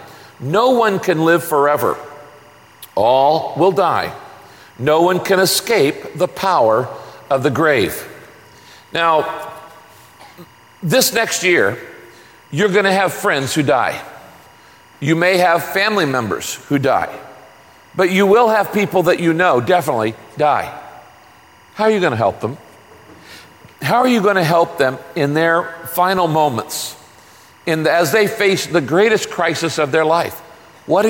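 From start to finish there's timecode bleed. Linear timecode from a nearby track or cable has leaked in, its square wave flipping between roughly 1 and 2 kHz at 23.976 frames per second. It sits about 30 dB under the sound as a constant chirpy warble.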